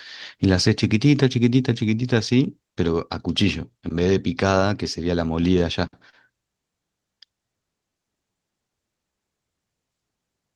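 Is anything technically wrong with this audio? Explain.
Yes, there are two timing faults.

From 6.10 to 6.15 s there is a short stall from a late packet. A packet arrived late, so the receiver held the last sound for about 32 ms. Nothing is lost, but one sound lingers slightly.

From 6.89 to 9.13 s there is a jitter buffer slow-down. The receiver repeated tiny stretches to rebuild its reserve, adding 122 ms. The speech plays at about 95% speed, drawn out but at unchanged pitch.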